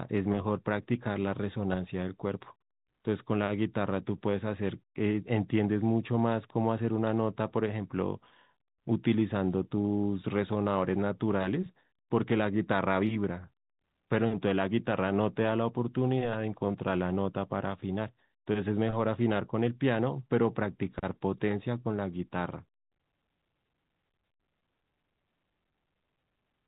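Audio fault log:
Nothing to enter in the audio fault log for this speech, which is carried on G.711 A-law telephone coding at 64 kbps.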